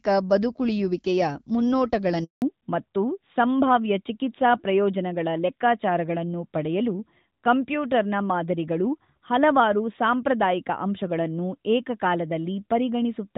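At 2.24 s a handover gap opens: the call switches networks, no speech frames arrive, and the sound drops out for 180 ms until 2.42 s. On the waveform this is a flat line after a brief decay; the spectrogram shows a blank vertical stripe.

From 2.42 s to the end, the call falls back to narrowband. The HD Voice link, whose light coding texture fits AMR-WB at about 12.65 kbit/s, gives way to a codec consistent with AMR-NB 12.2 kbit/s. Nothing remains above 4 kHz, so the sound turns duller and rougher. The spectrogram shows a hard horizontal ceiling at 4 kHz.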